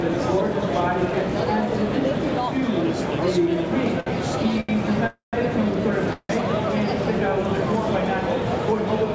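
The audio passes through a call codec, with nothing above 8 kHz, which fits G.722 at 64 kbps. There are two short stalls from late packets, at 4.00 to 4.08 s and 4.60 to 4.71 s. The last sound is held for 65 ms and 82 ms, then resumes with nothing lost. Two call audio freezes follow, at 5.07 to 5.35 s and 6.13 to 6.31 s. The sound fades into silence for about 140 ms and 60 ms, then continues where it stopped. The likely cause is packets held up in transit, draining the jitter buffer.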